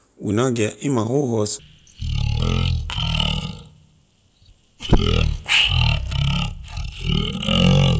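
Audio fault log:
1.59–7.99 s, wrong sample rate: from 1.59 s to the end the speech drops into a deep, dragging drawl, running at about 0.36 times its proper speed and sounding roughly 17.6 semitones lower, well over an octave down. Pitch and tempo fall together by the same factor, the mark of samples being clocked out slower than they were captured with no rate conversion, which fits audio recorded at 44.1 kHz being played back at 16 kHz.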